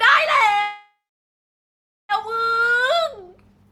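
A call audio freeze runs from 0.61 s to 2.12 s. The speech stops and the last sound is drawn out as a brief fading buzz before falling to silence for about 1.1 s. The speech then resumes exactly where it broke off, with nothing lost, so roughly 1.5 s of delay has been inserted. The likely cause is packets held up in transit, leaving the receiver's jitter buffer empty until they arrived.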